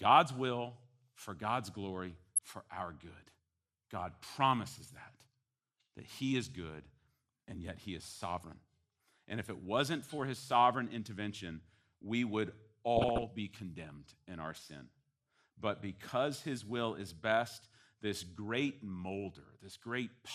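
Throughout the speech the sound is dull and carries a gurgling, granular texture. The upper frequencies come and go as if switched in and out, and the remaining detail sounds coarse. This is plainly audible MP2 compression, most likely MPEG Layer II coded with too few bits, at a rate in the region of 80 kbps. At that rate the encoder drops whole high sub-bands and quantises the rest roughly.

From 2.11 to 2.50 s, ending just before "our good", DAB burbling breaks out: short blips of noise sit over the speech. A second burst runs from 12.97 to 13.25 s, between "sovereign intervention we would" and "be condemned in our", and sounds somewhat denser. Both point to weak reception letting bit errors reach the MP2 data, at a rate of a few errors per thousand bits, worse in the second burst. Corrupted samples put short blips of noise into single sub-bands, and corrupted scale factors make sub-bands jump in level for up to a frame.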